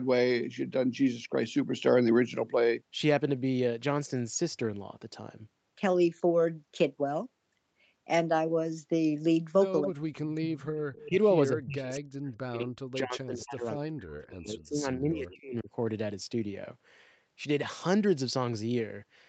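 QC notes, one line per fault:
9.84–10.66 s, 11.06–11.18 s and 11.52–15.7 s: speech suppressed in double talk. The sound dips by up to about 40 dB (about 20 dB in the brief middle one), likely from the canceller ducking during crosstalk.
10.93–11.09 s: echo leak. A faint copy trails 216 ms behind at about 20 dB under the speech, likely residual loudspeaker echo the far-end canceller missed.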